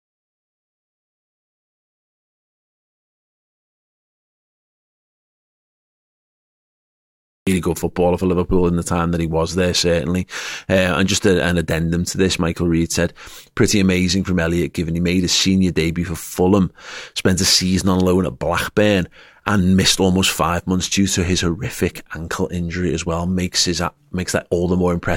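A speech clip that opens with an audio dropout to silence already in progress: from the very start to 7.47 s there is nothing at all, not even room tone, and the talker then enters mid-sentence at "good footballer for". On a waveform this is a flat, near-silent line; on a spectrogram it is a completely empty band with no noise floor before speech energy appears abruptly. The likely cause is a lost input, whether a disconnected device, a failed link or a mute, while recording continued writing silence.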